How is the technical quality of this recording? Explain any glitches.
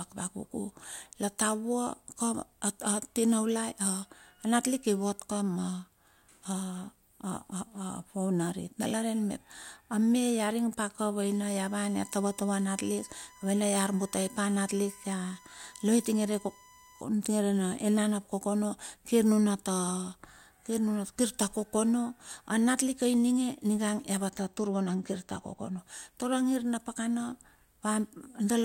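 The speech carries two distinct technical faults: a tonal whine in the middle and a brief stretch of comb filtering near the end.

From 11.26 to 17.01 s there is USB whine, a steady tone at 1 kHz sitting around 25 dB below the speech. It comes from the USB bus pulling current in regular 1 ms frames, and that periodic draw leaks into the audio through shared power or ground. Because the frame rate is fixed, the result is a constant-pitch whine at 1 kHz that runs underneath the speech for those six seconds.

From 24.30 to 25.79 s there is channel delay (comb filtering). One channel lags the other by only a couple of samples, roughly a twentieth of a millisecond, and when the two are summed to mono the shared content cancels at evenly spaced frequencies. With so short an offset the first notch falls high, around 10 kHz, so the speech loses top-end air and sounds dull for that stretch.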